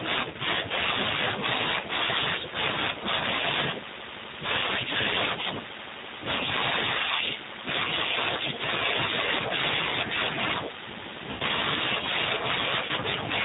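G.729 coding runs throughout: the speech is rebuilt from a vocal tract filter, pitch predictor and sparse pulses, sounding rough and synthetic, band-limited below 4 kHz, which fits an 8 kbit/s stream. VoIP packet loss concealed by the speech codec appears at 0.31–0.36 s, 11.31–11.43 s and 12.86–12.91 s. About 30 ms, 90 ms and 30 ms of audio went missing, which fits one, three and one lost packets. Each time the decoder stretches the last pitch and filter into a fading buzzy tone or coloured noise, and the sound stays weak briefly after.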